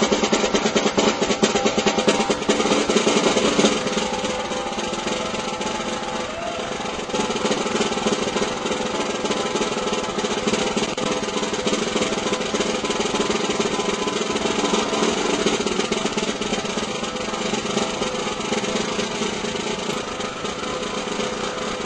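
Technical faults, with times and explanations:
0.0–2.0 s, adaptive stream starting at a low bitrate: the opening two seconds sound dull and smeared, with nothing above about 8.2 kHz and a watery, swirling coarseness on the remaining content, then the top end and detail return abruptly at 2.0 s with no break in the audio. The player began on a cheap rendition of the stream to start playback fast; the heavy artefacts fit MP3 at around 32 kbit/s, and the cleaner sound after the switch points to roughly 128 kbit/s.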